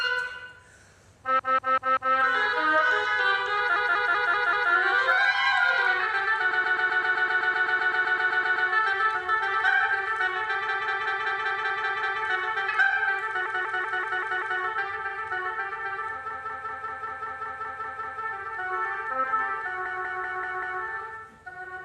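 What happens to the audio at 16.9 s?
Right there you're in a repeated-frames stutter from 16.30 to 18.22 s: one 192 ms block replays ten extra times, adding 1.92 s.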